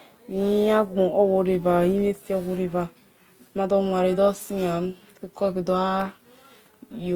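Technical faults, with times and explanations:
Throughout, Opus compression: the speech sounds plainly grainy and rough, with noise-filled bands despite full bandwidth, likely from a music-mode encode at around 24 kbps.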